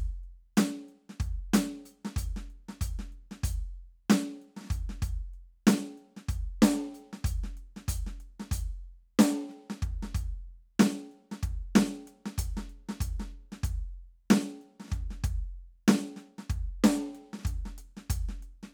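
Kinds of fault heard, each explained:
Nothing stood out on listening to this music clip.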